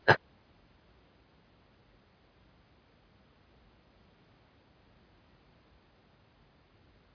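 Nothing here calls for comment, since the speech runs its whole course without a single technical fault turning up along the way.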